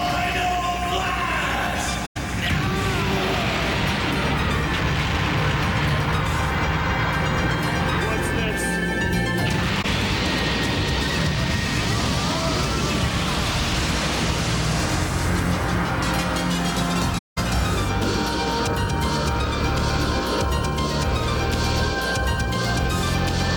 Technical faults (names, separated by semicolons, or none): AAC frame loss with muting